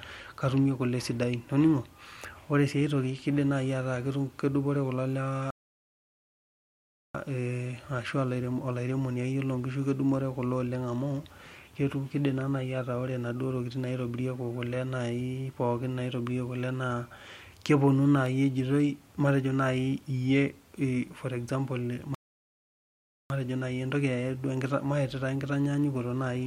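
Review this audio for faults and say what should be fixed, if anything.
Two rebuffering stalls interrupt the speech, at 5.51 to 7.15 s and at 22.15 to 23.30 s. Playback drained its downloaded audio and went silent until more arrived. It then resumed exactly where it stopped, so nothing is lost but 1.64 s and 1.16 s are added. A larger playback buffer or a lower-bitrate stream would prevent these stalls.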